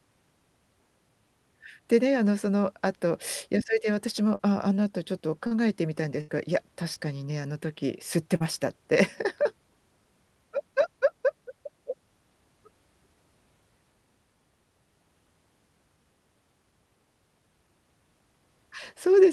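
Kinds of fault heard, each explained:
Short concealed packet loss: Brief stretches of the call arrived too late for the decoder, and the receiver covered each gap by extending the preceding sound before blending back into real audio. Four occur, at 4.35, 5.47, 6.94 and 8.36 s, each covering about 40 ms of lost audio, except the 20 ms one at 6.94 s. Each is heard as a quick smear or wobble. On a spectrogram, harmonics briefly freeze into flat, unchanging bands or grey noise, and the waveform shows a short, overly regular repeating stretch.
Burst of packet loss: Several consecutive packets went missing, so about 80 ms of audio from 6.21 to 6.30 s never reached the listener. The receiver held the last sound and faded it down across the gap, producing a sustained buzz or dying hiss before the audio jumps ahead. A spectrogram shows horizontal, pitch-locked bands or smooth noise that dim steadily, then an abrupt resumption. 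The waveform envelope decays through that span, with a discontinuity where the real signal resumes.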